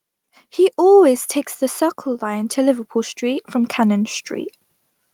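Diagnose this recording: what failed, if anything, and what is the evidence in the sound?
Call processing: automatic gain rising from 2.18 s to 4.33 s, lifting level by about 8 dB. Speech and background noise swell together, unlike a louder talker, whose background would stay put.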